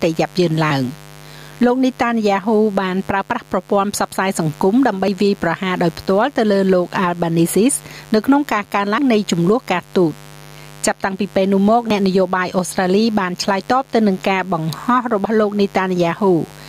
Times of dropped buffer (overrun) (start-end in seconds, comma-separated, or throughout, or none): 3.22, 5.08, 8.98, 11.90